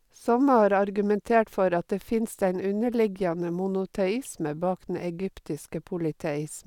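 No technical faults are audible.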